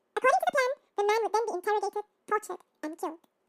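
Throughout, the speech plays at double speed and a full octave high: a wrong sample rate, fitting 24 kHz audio played at 48 kHz without conversion. Unlike a pitch shift or time-stretch, pitch and tempo rise together by the same factor of two.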